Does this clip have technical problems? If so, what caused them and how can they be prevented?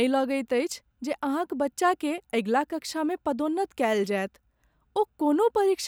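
No, this clip has no technical problems, so there is nothing to explain or prevent.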